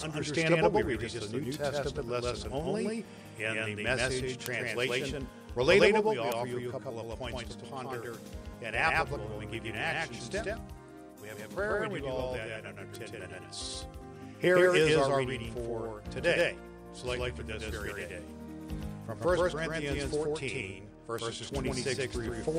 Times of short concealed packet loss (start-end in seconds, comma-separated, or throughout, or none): none